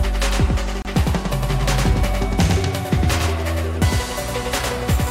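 From the very start there's a doubled audio track: a second full-band copy trails the original by around a tenth of a second, about 5 dB quieter, with no decay or room colour. It's likely a second capture through a slower path, or an edit holding two copies out of step.

Then at 0.82 s there's a gap at a join of encoded pieces, roughly 30 ms long, running to about 0.85 s. Two separately encoded pieces were butted together with the encoder's start delay and end padding left in, so the sound drops out briefly and then picks up exactly where it left off.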